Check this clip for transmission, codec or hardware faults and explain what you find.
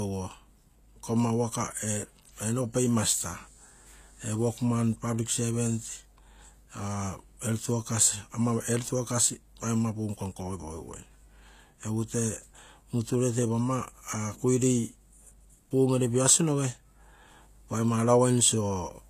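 One codec fault runs through the whole clip. The s sounds are gritty and metallic, and nothing is present above 14.9 kHz. This is likely HE-AAC compression, which rebuilds the treble by copying lower bands upward, and the damage fits a low bitrate near 24 kbps.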